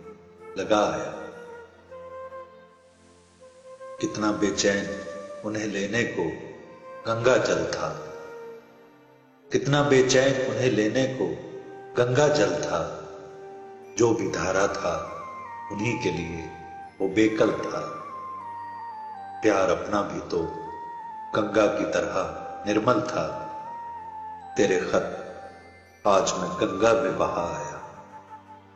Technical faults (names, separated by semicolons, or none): digital radio blending to analogue